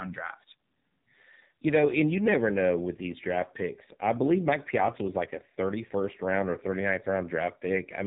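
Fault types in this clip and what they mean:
AMR narrowband mobile codec, throughout: the speech went through the 2G/3G codec, sampled at 8 kHz so nothing above 4 kHz remains, and resynthesised from a vocal-tract model driven by sparse pulses; the heavily buzzy, synthetic sound suggests a low mode near 6 kbps.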